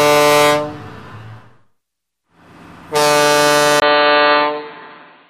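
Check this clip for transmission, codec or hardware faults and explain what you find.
One hardware fault is present. Input switched to a poorer device, from 3.8 s to the end: likely a change to a narrower-band microphone. After a 20 ms gap, nothing passes above 4.4 kHz, so the sound turns dull and boxy at much the same level, with a faint new noise floor underneath.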